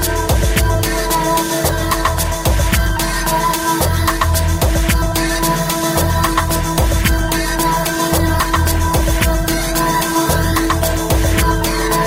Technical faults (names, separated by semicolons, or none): hard clipping; call bitrate drop